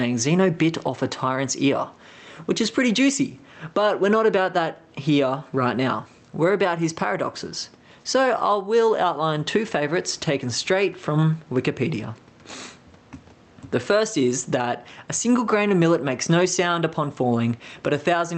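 Throughout, the gain ducks under loud speech by roughly 15 dB. This is gain pumping, likely a fast limiter reining in far too much input gain.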